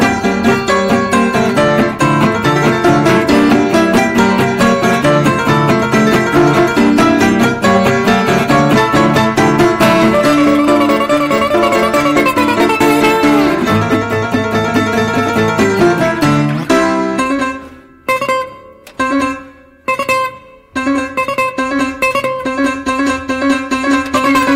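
From start to finish, a stage in the chain is being fed about 10 dB more level than it can pass, so every peak that exceeds its ceiling is sliced off flat. This is hard clipping, and it catches a small but steady share of the waveform, around one sample in twenty-five. Those squared-off tops add harmonics high in the spectrum, heard as a harsh, gritty fuzz riding on each loud moment throughout the audio.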